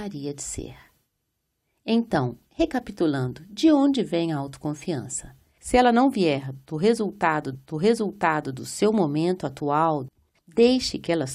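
At 7.54 s, right after "não vier do resultado", a stream segment repeated: the player queued the same stretch of speech twice, so about 1.0 s replays until 8.54 s, with a small blip at the jump back before "do seu momento atual" follows.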